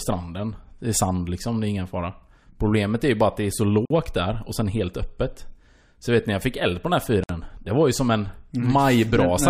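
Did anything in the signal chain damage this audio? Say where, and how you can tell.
Yes. At the codec stage, the speech has two gaps at joins of encoded pieces: one from 3.85 to 3.90 s (about 50 ms) and one from 7.24 to 7.29 s (about 58 ms). Each piece was encoded on its own, and the encoder's start-up delay and last-frame padding were left in at the splice. The waveform shows a flat dropout. On a spectrogram it appears as a full-band blank stripe with smeared edges, and the speech resumes exactly where it stopped.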